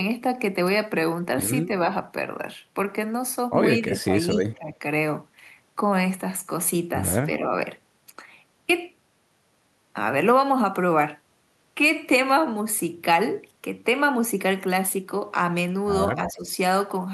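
Speech suppressed in double talk occurs at 3.78–4.81 s, 7.26–7.45 s and 16.17–16.5 s, where the speech dips by around 15 dB, 5 dB and 10 dB. The likely cause is an echo canceller failing to separate the talker from loudspeaker echo during simultaneous far-end talk and turning the talker down.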